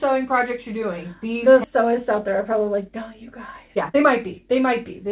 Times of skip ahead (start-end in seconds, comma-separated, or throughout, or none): 1.64-1.66